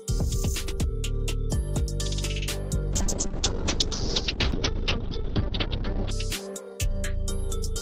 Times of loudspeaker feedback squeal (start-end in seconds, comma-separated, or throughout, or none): none